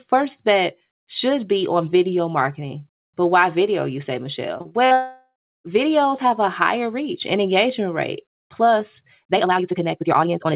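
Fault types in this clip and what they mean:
Repeated packet loss (robotic sound): audio packets kept going missing between 4.58 and 4.93 s, right after "why video you say", and each short hole, none longer than 44 ms, was bridged by repeating the last sound. Over a third of that stretch is patched, so it turns choppy.
Long network dropout: the stream most likely stopped arriving altogether from 4.93 to 5.66 s. The receiver extends the last sound as a fading buzz, then about a third of a second of silence follows before the audio resumes at "videos have a higher", with that part missing.
Time-stretched section: from 9.26 s to the end, the audio was likely squeezed to fit a shorter length, running about 1.9 times faster while keeping its pitch. Short pieces are dropped to do this, so the pace jumps suddenly and sounds rushed.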